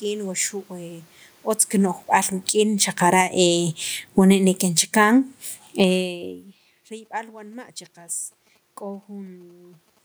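From 1.73 to 6.31 s the speech and its room background sink together by about 12 dB. This is automatic gain falling, where the gain control judged the input too loud, or its background noise too strong, and eased its gain down. Overlapping it, from 2.54 to 5.43 s, speech and background swell back by about 5 dB as automatic gain rising pulls the level up again, briefly countering the drop. The talker's own shifts near 1.5 and 6.0 s come through as natural distance changes. From 7.06 to 9.99 s a galloping dit-dit-dit of short buzzes at about 217 Hz sits well below the speech. These are GSM signalling bursts from a nearby 2G phone, rectified by the audio circuit.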